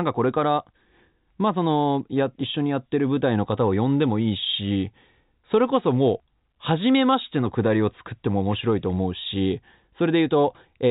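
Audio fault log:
No faults logged; the speech comes over a normal call path whose G.711 A-law coding leaves nothing above 4 kHz.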